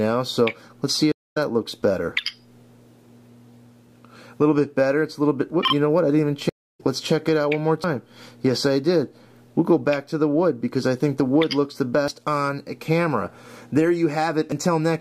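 At 1.12 to 1.37 s and 6.49 to 6.81 s, stream reconnects restart the decoder after a broken connection: silences of 240 and 296 ms, then the sound resumes further along. At 7.84, 12.08 and 14.52 s, a dropped buffer (overrun), likely unread samples being overwritten, causes a jump forward each time, the first one longest.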